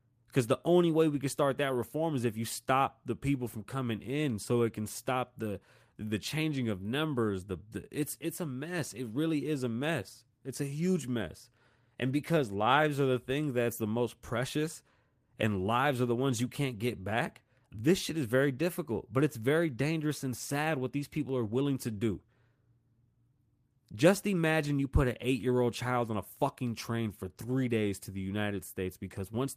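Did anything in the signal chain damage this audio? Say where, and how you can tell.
No, nothing along the signal chain has left an audible mark on this speech recording. At no point in the clip can any stage of capture, conversion, transmission, storage or playback be heard altering the signal.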